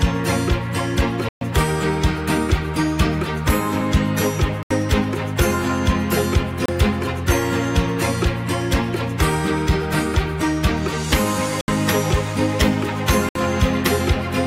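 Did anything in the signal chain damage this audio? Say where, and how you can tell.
Yes. The damage sits in the wireless playback link. The sound cuts cleanly to silence five times, at 1.29 s for 126 ms, 4.63 s for 77 ms, 6.66 s for 29 ms, 11.61 s for 71 ms and 13.29 s for 64 ms, then carries on. This is likely a Bluetooth stall: interference delayed packets, the headphones' buffer emptied, and playback waited for retransmitted audio before resuming.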